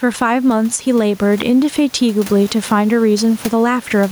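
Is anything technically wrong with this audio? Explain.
Yes, this speech has two faults. Gain pumping runs throughout: the level swings by around 10 dB. The input gain is likely set too high, so a fast limiter pulls the level down on every loud syllable. On a waveform the envelope looks flattened. Between 1.42 and 1.44 s there is a single loud pop, roughly 10 dB above the speech, likely from a plug, switch or static discharge. It shows as a sharp spike on the waveform and a thin vertical broadband line on a spectrogram.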